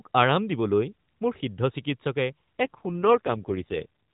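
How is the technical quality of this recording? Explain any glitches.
The recording is narrowband mobile speech, cut off above 4 kHz in the way of the AMR-NB codec, and it has one glitch near the end.

AMR rate drop, 2.62 to 3.86 s: the network appears to have pushed the codec down from about 12.2 to about 5.9 kbps, moving bits from the voice model to error protection. With no gap and no change of band, the speech turns buzzier and more synthetic.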